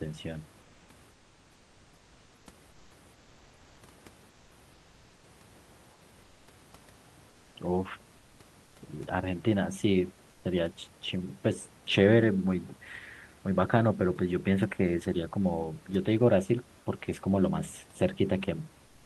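Likely Opus discontinuous transmission pauses sending during gaps, so comfort noise in place of the background appears at 0.61–2.91, 4.29–4.51, 5.93–6.47, 7.29–7.55, 8.63–8.75, 10.29–10.43 and 18.85–19.05 s. The textured room noise turns into a flat, steady hiss, about 2 dB quieter in five of these pauses.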